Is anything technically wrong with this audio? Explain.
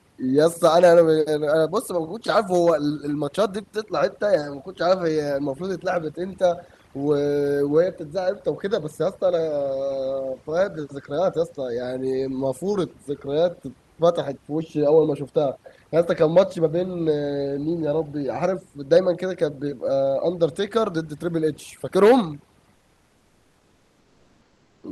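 Yes, there are two faults. Throughout, the background drops and breaks up into twinkling specks. This is overdone noise removal: a reduction stage set too strong pushes frequency bands near its noise estimate far down or off, taking quiet parts of the speech with them.

From 22.75 to 24.79 s, about 2.04 s, the real background, room noise roughly 40 dB below the speech, gives way to a steady, featureless hiss about 2 dB quieter. This is comfort noise in place of the background, likely from discontinuous transmission such as Opus DTX, where the sender pauses and the receiver fills the gap with synthetic noise.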